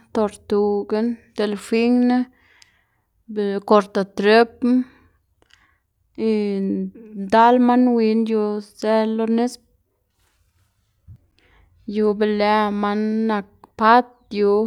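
Nothing stood out as a technical problem on listening to this speech recording.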